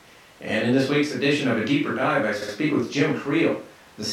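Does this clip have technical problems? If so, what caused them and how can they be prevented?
Yes. From 2.41 to 2.54 s there are repeated frames: the same 64 ms stretch of speech plays twice more, which fits a small run of compressed frames being written or sent again. The clip gains 128 ms. To prevent it, the encoder output or transport should detect and discard duplicate frames by checking sequence numbers or timestamps before decoding.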